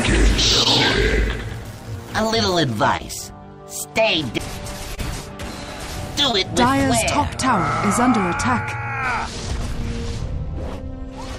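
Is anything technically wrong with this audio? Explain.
Yes. There is short concealed packet loss at 0.63–0.67, 2.97–3.01, 4.95–4.99, 6.31–6.35 and 10.75–10.79 s. Each time, about 20 ms of the stream failed to reach the decoder in time, and the receiver patched the gap with roughly 20 ms of synthesised continuation, extending the preceding sound's pitch or noise texture before crossfading back into the real signal. The result is a brief smear or wobble at each point.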